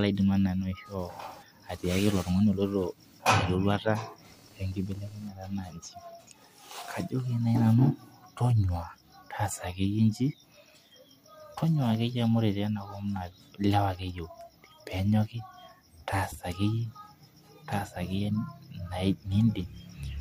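From 0.0 to 5.3 s there is computer activity noise. Changing load in the computer disturbs the shared ground of the audio circuit. It comes through as a chirping buzz pulsing around 200 times a second, roughly 30 dB below the speech.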